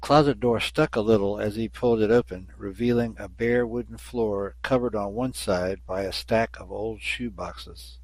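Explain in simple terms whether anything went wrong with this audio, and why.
Something did go wrong: the speech sounds dull and gurgly and grainy the whole way through, from start to finish. That's likely MP2 compression squeezed too hard, so the codec drops the upper frequency bands and roughly approximates what's left.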